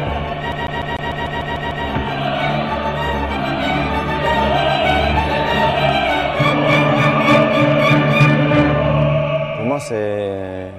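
From 0.52 to 1.86 s the audio sticks like a CD stuck on one turn: a scratch sends the laser back a track each rotation, so one 0.15 s slice repeats nine times with brief mutes at each jump. That rapid, evenly timed stutter separates it from irregular dropouts.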